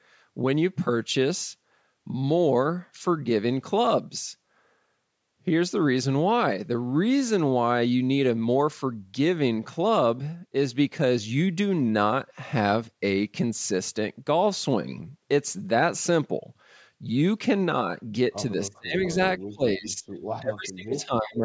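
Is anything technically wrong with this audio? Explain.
Yes. Two faults are audible near the end.

Speech suppressed in double talk occurs at 18.68 to 19.18 s, 19.47 to 20.07 s and 20.40 to 21.42 s. The speech dips sharply, by about 30 to 35 dB at its deepest. The likely cause is an echo canceller that could not separate the talker from loudspeaker echo while both sides spoke. It turned both down.

Echo leak appears at 20.33 to 20.40 s and 20.65 to 20.69 s. These are brief scraps of a delayed copy of the speech, lagging by about 0.32 s. The first is very faint and the second is more noticeable. The copy likely came from a loudspeaker whose echo canceller let some of the microphone pickup through.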